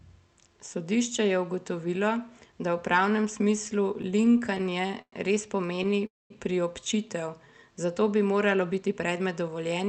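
Repeated stalls (stutter) hit the speech from 4.01 to 5.14 s, after "da v pravnem smislu". Late packets emptied the jitter buffer twelve times, the longest gap 108 ms. Speech drags and stutters. A shorter stutter follows from 5.66 to 5.94 s, just before "priobčitev zato bi", with five brief gaps.

A call audio freeze runs from 6.06 to 6.32 s. A gap of roughly a quarter second opens, mostly silent. Packets held up in transit likely drained the buffer.

A jitter buffer speed-up runs from 8.64 to 9.87 s, after "priobčitev zato bi". Pitch-period slices, about 150 ms in all, were cut. Speech runs at 111 % speed, sounding hurried at unchanged pitch.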